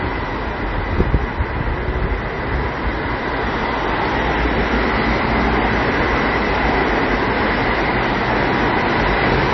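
Throughout, the audio was likely squeezed through heavy MP3 compression, so nothing survives above 5.9 kHz and the sound turns watery and swirly, fitting a very low bitrate.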